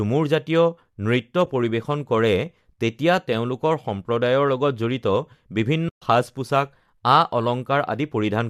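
Compressed frames went missing twice in this speech, and the decoder muted each gap by zeroing its spectrum, which is AAC frame loss with muting. At 1.46 s the hole lasts 10 ms, which points to one lost frame. From 5.89 to 6.02 s it lasts 130 ms, which fits a run of about thirteen frames. Overlapping windows fade the sound out and back in, so the single lost frame is a brief dip and the longer run a soft-edged silence. The light coding damage of the surrounding audio is likely from low-delay AAC compression.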